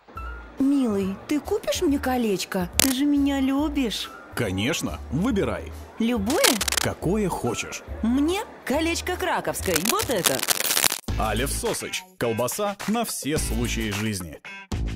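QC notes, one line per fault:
2.73–2.92 s: cable scratch noise, a short burst of dense, uneven crackle standing about 5 dB above the programme, heard as scratching laid over the sound, likely from a worn cable or connector being moved so its contact resistance jumps rapidly.
6.30–6.84 s: cable scratch noise, similar rustling bursts at roughly the programme's own level, over about half a second.
9.62–11.01 s: cable scratch noise, the longest run, about 1.4 s of irregular scratching at roughly programme level.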